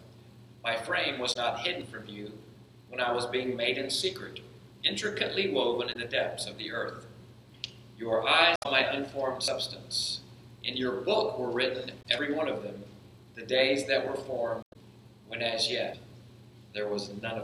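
At 1.29 s a brief glitch marks damaged data in a compressed stream. The decoder loses frame sync. At 1.81 s a skip follows, with about 40 ms missing. A dropped buffer (overrun) is the likely cause. Damaged data returns at 5.89 s and 8.53 s. A skip of roughly 70 ms comes at 9.48 s. Then damaged data at 11.99 s, a 40 ms skip at 12.19 s, damaged data at 14.6 s, and a skip of about 100 ms at 15.94 s.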